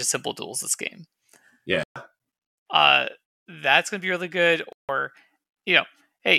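A speech clip where wireless packets likely failed to arrive, causing Bluetooth dropouts: abrupt silences at 1.84–1.96 s and 4.73–4.89 s (after "to be really good"), with sound resuming as though it had played on.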